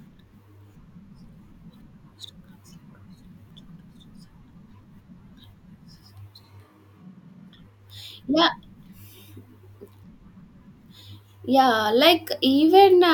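From 6.44 s to 7.54 s the speech abruptly turns roomy and hollow, with thinner bass and more background noise, roughly 35 dB below the speech, while the level stays about the same. This is likely a switch to a distant microphone, which cuts back just as suddenly.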